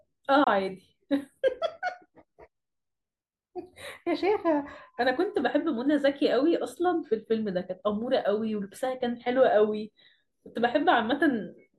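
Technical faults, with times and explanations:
0.44 to 0.48 s, Bluetooth dropout: the speech cuts to silence for about 23 ms, then resumes further along as though it had kept playing, which fits one lost packet that likely failed to reach the headphones in time.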